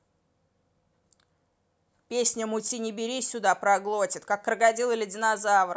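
No technical faults are audible.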